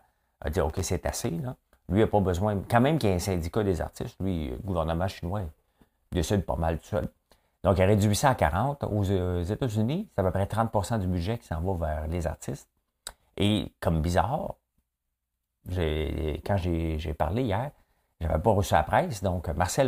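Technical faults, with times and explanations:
0.70–1.24 s and 7.04–7.26 s, processor overload crackle. A gritty burst follows "a dit", and a shorter one follows "décide pas mal tout". Short buffers of roughly a millisecond or two miss their deadlines in a row. Each miss drops in a hard-edged gap of silence, heard as crackle.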